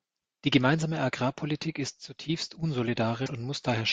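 Speech clip where a likely broken MP3 bit reservoir, with frames cut from the stream, makes the sound jump ahead into a brief glitch from 3.25 to 3.29 s.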